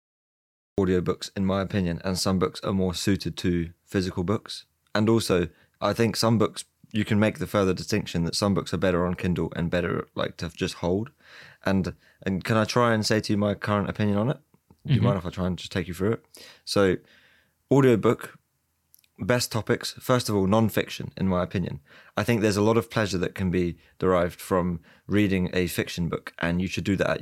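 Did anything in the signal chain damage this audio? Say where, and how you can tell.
Yes, there's a cut-off start, most likely from capture or the stream beginning late. The first 0.78 s is dead digital silence, then the speech drops in mid-sound right on "in my opinion and", with no natural attack or fade-in.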